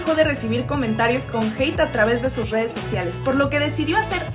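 No technical faults can be heard anywhere here.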